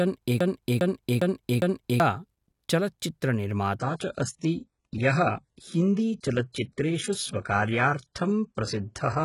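A broken-record loop runs from the very start to 2.0 s, already under way when the speech begins. A fragment of about 405 ms repeats four times back to back, with no change between passes. This is likely a stall in the player, encoder or stream, which kept re-sending the last piece it held instead of moving forward. Whatever speech belonged in those two seconds never plays.

From 3.79 s to the end, the adaptive stream drops to a lower bitrate. The switch is sudden, with no gap. Everything above 11.1 kHz disappears while codec artefacts grow. The sound points to the connection slowing and the player falling back from roughly 96 kbit/s AAC-LC to a 12 kbit/s HE-AAC version, which rebuilds its upper band instead of carrying it.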